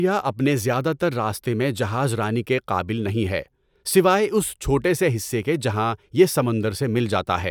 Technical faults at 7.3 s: none

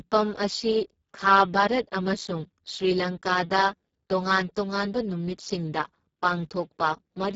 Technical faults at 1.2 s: Speex codec

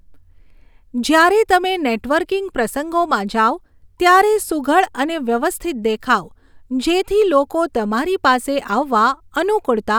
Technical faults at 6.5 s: none

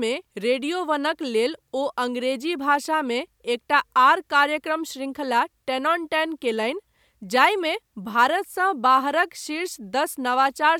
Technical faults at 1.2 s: none

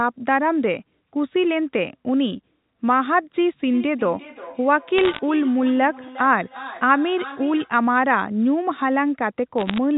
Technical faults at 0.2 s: none

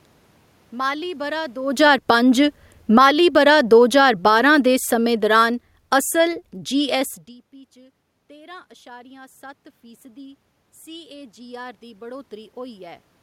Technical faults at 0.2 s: none

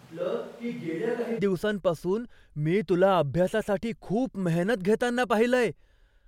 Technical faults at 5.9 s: none

